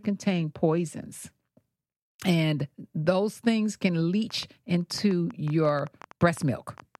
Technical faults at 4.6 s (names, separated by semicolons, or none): train of clicks